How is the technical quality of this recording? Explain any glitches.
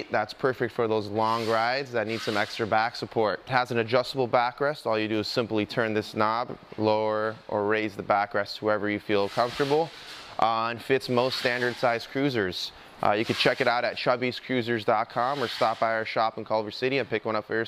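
The recording's technical quality holds up, and there are no glitches to explain.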